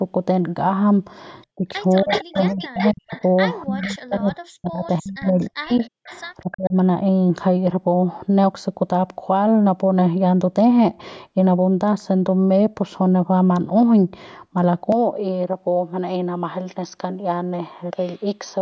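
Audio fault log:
1.56–3.12 s, 3.66–5.81 s and 6.43–6.76 s, speech suppressed in double talk: the voice ducks and breaks into pieces, falling by as much as about 40 dB in the first two stretches and about 20 dB in the last. This is likely an echo canceller that, with both sides talking, could not tell its own talker from loudspeaker echo and turned everything down.
1.95–3.28 s, 3.81–4.19 s and 4.92–6.70 s, echo leak: a second copy of the voice trails the original by 320 ms, at about 10 dB, then 15 dB, then 20 dB below the speech. This is likely a loudspeaker on one side whose echo canceller left part of the returned sound in its microphone signal and sent it back.
6.01–6.07 s, background gated by the echo canceller: the room sound drops out abruptly by about 40 dB for a brief moment, then returns. The canceller clamped the microphone hard while the loudspeaker was active and released it almost at once.
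14.92–18.62 s, input switched to a poorer device: with no gap at the switch, the sound turns duller and about 5 dB quieter, and new noise sits roughly 50 dB below the signal. This likely comes from the input moving to a narrower-band microphone or headset call profile.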